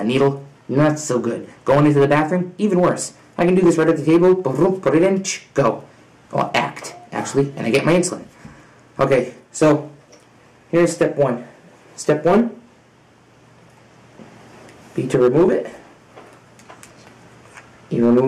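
Hard clipping runs through the whole clip. The signal was pushed about 9 dB past what some stage in the chain could pass, so the peaks get sliced off flat instead of rounding over. Only a small share of the audio is actually over the limit, something like 2 percent, so you hear it as gritty crackle on the loudest moments, where those squared-off tops spray harmonics up into the high end.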